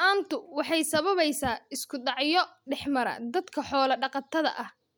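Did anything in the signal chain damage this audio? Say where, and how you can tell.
No, nothing in the chain has left an audible mark on this speech recording. I can't place any damage at any stage, from wiring and conversion through to storage and playback.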